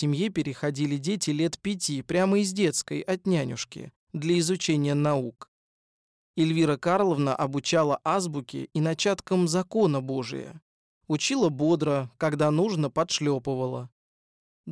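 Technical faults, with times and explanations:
No technical faults detected.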